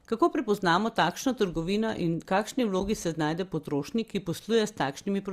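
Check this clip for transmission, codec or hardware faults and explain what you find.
One transmission fault stands out: a brief dropout in the speech at 2.80 s. At that point there is an AAC frame loss with muting. A block of coded audio never reached the decoder. The decoder filled the gap with silence by zeroing that frame's spectrum. The overlapping windows fade the sound down into the gap and back up after it. The hole lasts about 10 ms, which fits a single lost frame of low-delay AAC. It sounds like a soft, momentary blink in the speech. The speech carries a faint roughness, likely from light low-delay AAC compression working as intended.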